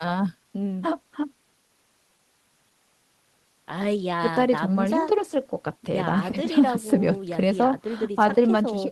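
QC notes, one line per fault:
No technical faults were heard in the signal, which runs continuously with nothing to flag.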